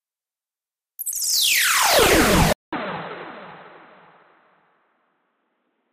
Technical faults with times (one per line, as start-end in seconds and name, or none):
2.53-5.93 input switched to a poorer device